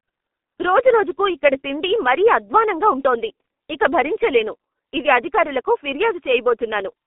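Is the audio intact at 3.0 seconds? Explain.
No. At 3.0 s the speech is carrying G.723.1 codec damage, and that runs through the whole clip, not just that moment. The codec chops the signal into 30 ms frames and refits a coarse voice model only once per frame, so consonants smear and the tone turns hoarse. The band is squeezed to roughly 250 Hz to 3.4 kHz, with nothing above 3.6 kHz, which gives that muffled, phone-line sound and fits a bitrate of around 6 kbit/s.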